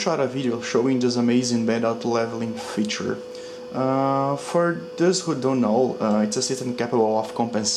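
No technical faults are audible.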